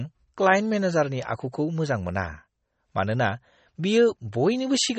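Throughout the speech the sound is watery and swirly, with nothing above 8.4 kHz, plainly audible damage that is likely MP3 compression at a low bitrate, around 32 kbps.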